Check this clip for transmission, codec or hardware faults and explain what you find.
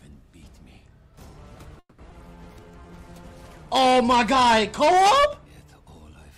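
There are three transmission faults here, all bunched into about a second of the clip.

From 1.79 to 2.01 s there's a call audio freeze. The last bit of sound gets stretched into a fading buzz for about 190 ms, with the final 40 ms going silent. The likely cause is packets held up in transit, which let the jitter buffer run dry. When the audio comes back it carries on exactly where it stopped, so nothing is lost, but a gap has been added.

Right after, at 2.10 to 2.14 s, there's a skip ahead. Somewhere around 70 ms of sound was dropped while later audio was already queued, so playback jumps forward and the two sides are stitched together almost directly. You hear it as a lurch rather than a gap.

Then from 2.54 to 2.96 s there's a jitter buffer slow-down. The receiver was rebuilding its reserve by repeating tiny pitch-period chunks, adding about 73 ms. That stretch plays at roughly 85% speed with the pitch unchanged, so sounds come out a bit drawn out.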